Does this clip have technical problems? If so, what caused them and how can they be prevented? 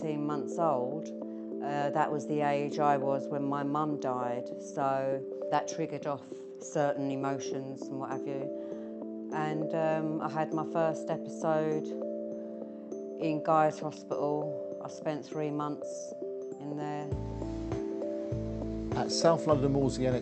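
No, this clip has no technical problems, so there is nothing to prevent.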